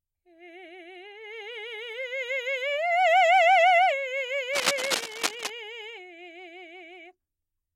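At about 4.53 s a rough, scratchy rustle breaks in over the music and hangs around until roughly 5.50 s, just under a second. That's cable scratch noise, sitting only a little below the music itself, so it's hard to miss. The likely culprit is a worn cable, connector or control getting nudged: the contact resistance jumps around quickly, and that shows up as dense, ragged bursts of crackle riding on top of the signal.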